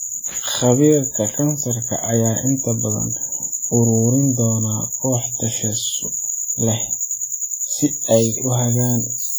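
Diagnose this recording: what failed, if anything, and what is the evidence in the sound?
Throughout the speech, the sound carries the smeared, swirly texture of heavy lossy coding, with the spectrum stopping at about 20.2 kHz, even though the file itself is an MP3 at a generous bitrate. This is low-bitrate audio saved at a high bitrate, a fault at the codec stage. The damage points to an earlier encode at around 32 kbit/s, likely WMA. Re-encoding to MP3 preserved those losses faithfully but could not rebuild the detail the first codec discarded.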